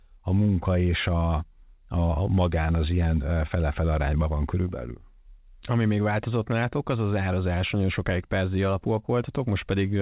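Nothing stood out on listening to this speech, which carries the band-limited character of mu-law telephone coding.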